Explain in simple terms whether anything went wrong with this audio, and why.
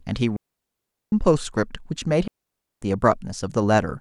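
Two digital wireless dropouts cut the speech out entirely: from 0.36 to 1.12 s, then from 2.28 to 2.82 s. Each time the wireless receiver lost too much data and simply muted, leaving a clean silent gap with no crackle or hiss on either side.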